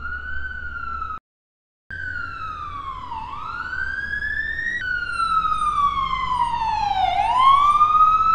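A recording of sounds with a playback stall from 1.18 to 1.91 s, where output falls silent for about 0.73 s and then resumes. This is a stall, likely from the player running short of data. From 1.91 to 4.81 s comes catch-up at higher speed: the backlog plays at 1.25 times normal speed, raising the pitch by roughly four semitones, then settles back. Since tempo and pitch rise together and then recover, this is resampled catch-up rather than a fixed pitch shift.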